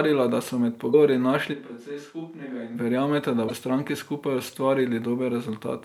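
From 0.90 to 0.95 s, right after "da so med", damaged data in the compressed stream makes the decoder lose sync and hunt for the next frame. The result is a brief glitch, visible as a broadband vertical smear on a spectrogram and a ragged break in the waveform.

From 1.55 to 2.74 s, ending just before "verjameta da", the sound turns suddenly roomy and hollow, with thinner bass. The likely cause is a switch to a distant microphone. The level drops by about 10 dB, a step easily seen in the waveform envelope, and room noise sits about 35 dB below the speech, filling the spectrogram's gaps with a faint haze.

From 3.46 to 3.51 s, after "verjameta da", a second burst of stream damage gives the same kind of glitch, with the same broadband streak on the spectrogram.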